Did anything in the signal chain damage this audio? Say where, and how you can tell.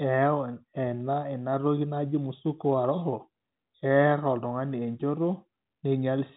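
No, nothing in the signal chain damaged this audio; it carries only the ordinary band limit of G.711 telephone coding, with nothing above about 3.8 kHz.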